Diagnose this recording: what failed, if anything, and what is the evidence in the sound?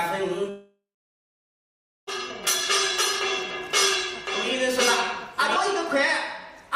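Two separate failures are audible. At 0.49 s the audio stops arriving and does not resume until 2.09 s, a long network dropout, likely from a stalled connection. The receiver extends the last sound as a fading buzz for a few tenths of a second, then leaves about 1.25 s of near silence, and the lost audio never returns. On a spectrogram this is a smeared, decaying band collapsing into a dark gap. The waveform flattens almost to zero.

From 2.30 s to 5.56 s a doubled audio track runs, likely a second capture path or an editing slip stacking two copies. A full-band duplicate trails the original by roughly one second at about equal level, with no reverberant decay or room colouring, and it switches on and off abruptly at those boundaries. A spectrogram shows every feature repeated about a second later at matching intensity. The waveform shows the same envelope shapes recurring at that fixed offset.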